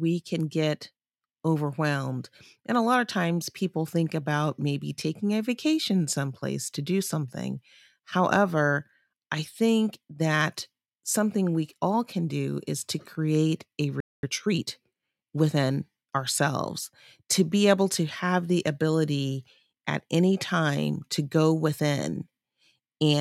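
At 14.00 s the speech cuts out abruptly and stays silent for about 0.23 s, a gap of 228 ms, before resuming at 14.23 s. The break lands mid-flow rather than at a natural pause, so it reads as a hiccup in delivery rather than a breath. This is a playback stall: the player likely ran short of buffered data, or its audio thread was briefly blocked, and output went quiet until it recovered.

From 14.23 s to 14.67 s the speech sounds hurried, running at roughly 1.5 times normal speed while the pitch stays where it was. This is time-compressed catch-up. Having fallen behind during the stall, the player trims its backlog by dropping short slices of audio and cross-fading the remaining pieces together. That shortens the passage without shifting pitch.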